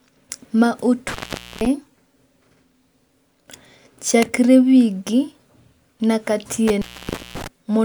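A loose connection in the signal path, an intermittent contact, breaks twice. From 1.08 to 1.66 s the line opens for about 0.47 s, and from 6.68 to 7.47 s for about 0.54 s. Each time the speech drops out to faint hiss, with crackle at the break and the return.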